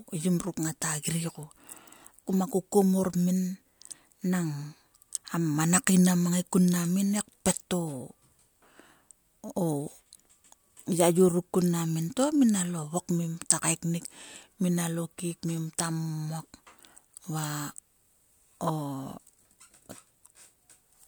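No technical faults occur at any point in this audio.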